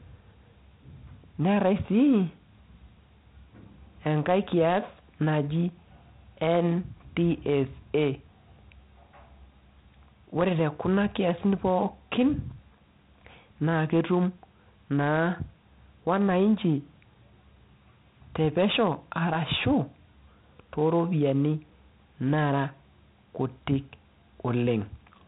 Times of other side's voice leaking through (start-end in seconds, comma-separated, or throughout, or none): none